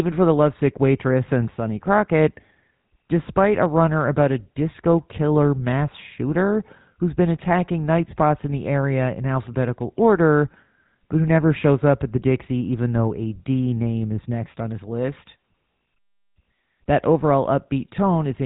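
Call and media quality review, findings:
Buzzy, gravelly roughness on the speech throughout, band-limited with nothing above 4 kHz. Probable component: GSM full-rate codec, consistent with 13 kbps. Vocal-tract model driven by a sparse, regularly spaced pulse excitation; plainly audible codec damage.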